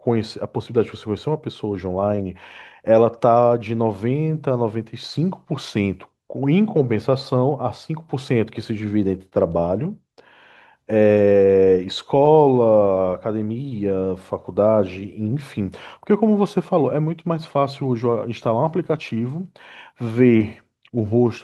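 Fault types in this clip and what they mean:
Short concealed packet loss: About 20 ms of the speech failed to arrive in time, at 2.15, 9.29 and 20.37 s. Each time, the receiver patched the gap by extending the last sound, then blended back into the real signal. The patches ran roughly 20 to 30 ms. They show as brief smears or wobbles, each spanning about 40 to 50 ms. Any very short consonant in those spots can disappear.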